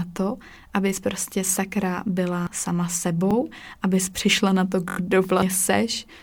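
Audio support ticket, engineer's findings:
Repeated buffer at 1.47–1.49 s after "to abys prostě" and 3.31–3.33 s before "abys přišla na to": one extra play each, hard-edged stutter. At 4.89–4.97 s after "abys přišla na to", four repeats, a longer stutter. Playback underrun. The 21 ms repeat fits a 1024-sample buffer.

Damaged data in a compressed stream at 2.47–2.50 s and 5.42–5.46 s: short glitch each time. Corrupt bytes in the encoded stream. The decoder misreads frames, loses sync and hunts for the next frame header.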